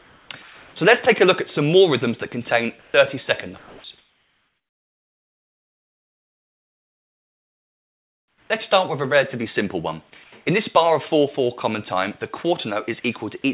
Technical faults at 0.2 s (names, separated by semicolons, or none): comfort noise in place of the background